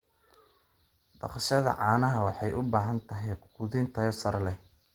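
Speech runs through the whole clip with plainly audible Opus compression damage, most likely from a low-rate hybrid-mode encode. Its grainy, hoarse, muffled texture fits roughly 16 kbps, and the band still reaches about 20.1 kHz, so the bandwidth has not narrowed.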